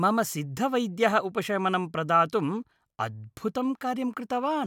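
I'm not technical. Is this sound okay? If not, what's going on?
Yes, nothing's wrong here; it's just a short bit of speech with no dropouts, glitches or other faults to worry about.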